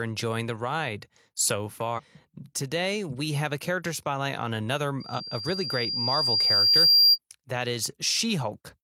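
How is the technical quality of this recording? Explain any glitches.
The recording has clear technical faults. There are two bursts of corrupted data and one feedback squeal.

Damaged data in a compressed stream occurs from 1.94 to 2.00 s, after "enjoying the ride so", and again from 5.14 to 5.20 s, after "character spotlight on another". Bad bytes made the decoder lose frame sync and hunt for the next header. Each is a brief glitch.

A loudspeaker feedback squeal runs from 5.0 to 7.18 s, also after "character spotlight on another". The microphone picked up its own loudspeaker, and at 4.8 kHz the loop gain passed one. The tone swells over about two seconds into a piercing whistle, about 15 dB above the speech.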